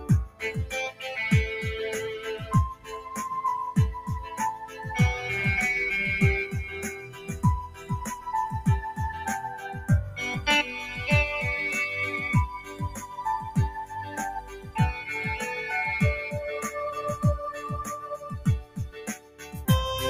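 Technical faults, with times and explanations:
Throughout, noise suppressor applied to music or sounds. A suppressor built for speech stays active across the whole clip. It treats sustained and ambient parts of the sound as noise and pulls them down. Its gain keeps shifting, with a loss swing of about 10 dB. Sudden onsets pass mostly intact, but held and decaying parts sink. The level therefore pumps and the sound thins instead of staying even.
At 0.00–0.42, 2.42–3.14, 4.23–4.84, 6.96–7.29, 7.68–8.27, 12.60–13.16, 13.87–14.76 and 18.03–19.56 s, sound cut by the noise suppressor. In each span the suppressor judges the sound to be noise and cuts it harder than its surroundings. The drops range from about 8 dB to about 15 dB. The longest and deepest is at 18.03–19.56 s, where roughly a second is pulled down. Steady and fading portions dip audibly while sharp attacks survive.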